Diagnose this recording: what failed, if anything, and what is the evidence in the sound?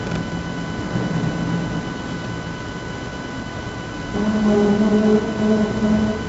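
Codec stage: heavy 4-bit ADPCM compression throughout, fitting a 64 kbps stream. Coarse prediction steps leave gritty hiss tracking loud sound on the spectrogram, nothing above 7.7 kHz.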